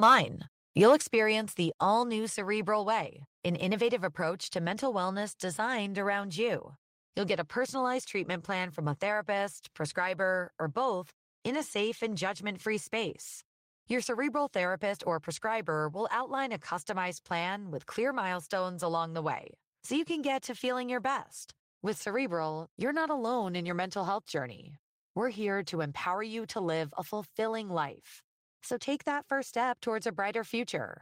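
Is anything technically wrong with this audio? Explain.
Yes, there are two related faults near the start.

From 0.81 to 0.95 s there is microphone overload. The likely cause is an input gain set too high for the loudest moment, driving the peaks about 2 dB past the converter's ceiling. A few percent of the samples in that stretch are flattened at the converter's limit. Squaring off those peaks adds a harsh, crackly edge to the loudest part of the sound instead of a clean transient.

At 1.02 s the microphone volume is stepped down. Right after the distorted peak, the level of the speech and the background together falls by about 6 dB in a single step, with no gradual fade. This is likely the call software reacting to the clipping by lowering the device's input gain. It is heard as an abrupt drop in loudness, so everything after that point sits quieter.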